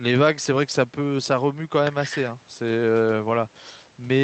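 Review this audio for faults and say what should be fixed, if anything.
Nothing to fix: the speech shows no faults, and the call path, which tops out around 8 kHz on this Opus-coded WebRTC link, is working as intended.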